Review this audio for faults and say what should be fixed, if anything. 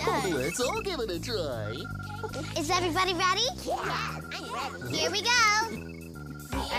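From 3.67 s to the end at 6.78 s there is a block size mismatch (padded): each block read is slightly short, and the missing samples are zero-filled, creating a 43.1 Hz buzz consistent with 1024-sample blocks. The slowdown is negligible (0.999x). To prevent it, have both stages negotiate one block size.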